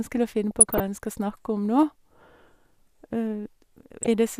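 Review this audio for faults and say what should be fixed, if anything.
There's DAB burbling in two spots, from 0.51 to 0.80 s and again from 4.03 to 4.14 s, over the speech. It's weak-reception damage. Bit errors, on the order of a few tenths of a percent, slip past the error correction into the MP2 data, so corrupted samples put short blips of noise in single sub-bands and corrupted scale factors make sub-bands jump in level for up to a frame. The first patch fits roughly a dozen frames being hit. Fixing it means a better antenna or a stronger multiplex before recording.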